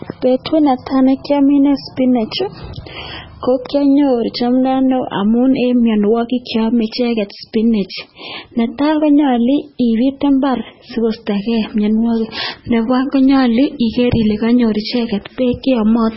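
From start to finish the speech carries heavy MP3 compression damage, likely from an encoder starved of bits, with the sound pointing to a rate around 16 kbps. Nothing survives above 5.6 kHz, so s sounds lose their hiss and the speech turns dull and watery, with a swirling, chirpy texture as weak frequency lines flicker in and out. On a spectrogram a hard ceiling sits at 5.6 kHz, and the energy beneath it breaks into patchy, shifting blocks.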